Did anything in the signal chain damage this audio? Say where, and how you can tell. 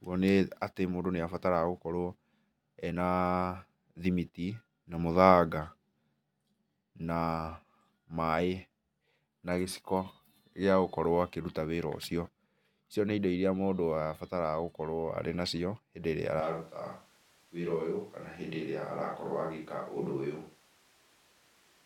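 Yes. From 16.4 s to the end, the speech abruptly turns roomy and hollow, loses bass, drops by about 5 dB and sits over room noise only around 30 dB down. At the capture stage, the close microphone likely dropped out, forcing a switch to a distant microphone.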